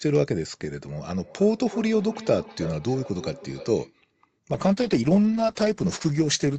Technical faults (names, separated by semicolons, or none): feedback echo between two devices; call bitrate drop